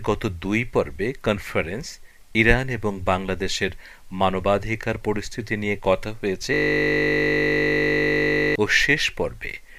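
From 6.54 to 8.56 s the machine hangs: the computer or its audio driver stops supplying new data, yet the sound hardware keeps cycling through the same ring buffer. This system hang loop replays a single 20 ms slice of audio exactly, about a hundred times over. Because the slice is so short, it repeats at 50 Hz, and the sound freezes into a steady buzz at that rate for roughly two seconds.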